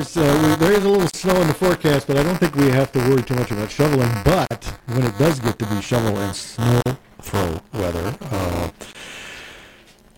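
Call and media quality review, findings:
Buffer tearing, throughout: writer and hardware read pointer have slipped on the ring buffer and cross within every period, so about a tenth of each buffer replays audio roughly 15 ms old. Result: steady 200 Hz robotic buzz, present only when there is signal.

Gap at a join of encoded pieces, at 1.10 to 1.14 s (37.5 ms), 4.46 to 4.51 s (51.8 ms), and 6.81 to 6.86 s (48.2 ms): separately encoded segments were concatenated untrimmed, keeping encoder start delay and last-frame padding. Result: dropouts with smeared edges, with the sound then continuing from where it stopped.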